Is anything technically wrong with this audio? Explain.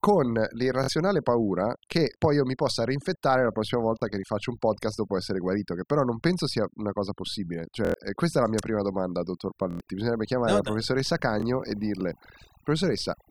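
Yes. Two faults are present.

Overdone noise removal affects the whole recording. The noise reducer was set too aggressively, so any frequency band sitting near its noise estimate is pulled far down or switched off, and the quieter components of the speech are removed along with the noise. The background drops and breaks up into twinkling specks.

Repeated buffer occurs six times: 0.84–0.88 s, 2.14–2.16 s, 3.99–4.02 s, 7.85–7.94 s, 9.71–9.80 s and 11.40–11.42 s. Each time, fresh audio didn't reach the device in time, so it replayed the previous block, about 23 ms long, which fits a 1024-sample buffer. At 0.84 s the block repeats twice, and at 7.85 s and 9.71 s four times, giving an audible stutter with a hard join at each repeat. Roughly 20 to 100 ms of real audio is lost per event.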